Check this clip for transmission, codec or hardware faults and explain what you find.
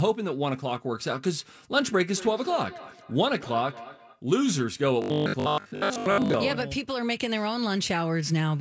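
Two faults stand out in this speech clip.

From 2.14 to 4.23 s there is feedback echo between two devices. A second device replays the audio, and the first microphone picks it up again, so every syllable returns at a fixed interval of roughly 200 ms at about 16 dB below the speech. On a spectrogram this appears as evenly spaced, fainter copies of each burst.

From 5.02 to 6.34 s the sound turns into a rigid, metallic 50 Hz buzz that still roughly follows the speech. The likely cause is robotic sound from repeated short buffers. The software loops a 20 ms chunk and skips most of the real audio. On a waveform this shows as identical repeating cycles, and on a spectrogram as flat harmonics spaced 50 Hz apart.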